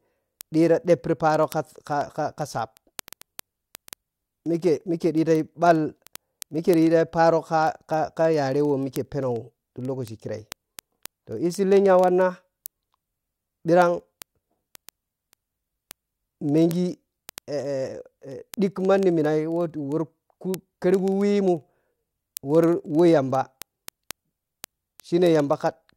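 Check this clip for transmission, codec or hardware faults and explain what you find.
One fault runs through the clip: word clock ticks, from 0.14 s to 25.93 s. The receiving device runs on its own clock instead of locking to the digital link's sender, and the two clocks disagree by roughly 500 ppm. Each time they slip past each other, a sample is dropped or repeated. That happens about every 40 ms, so the speech carries a steady stream of hundreds of sharp ticks of uneven strength.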